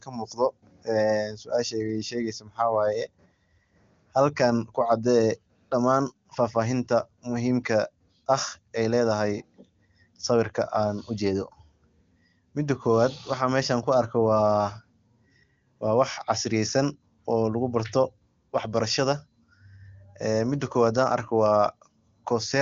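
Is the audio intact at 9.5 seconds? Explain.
Yes, the speech at 9.5 seconds is intact, carried cleanly through the AMR wideband (HD Voice) codec at 23.85 kbit/s.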